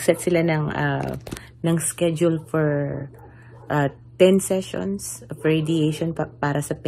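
No technical faults are audible anywhere in the recording.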